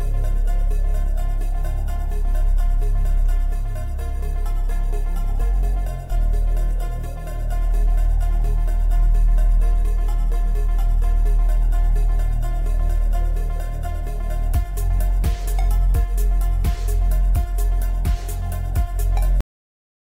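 At 19.41 s the audio has a cut-off end: the sound stops abruptly mid-event, with no natural decay, and the remaining 0.75 s is digital silence. The final buffers were never written or played back, so the recording simply ends partway through.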